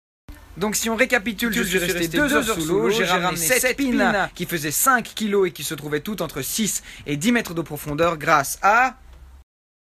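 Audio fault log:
1.45–4.29 s, doubled audio track: an equally loud, full-band copy trails by about 150 ms, starting and stopping abruptly with no decay, unlike echo; likely a second capture path.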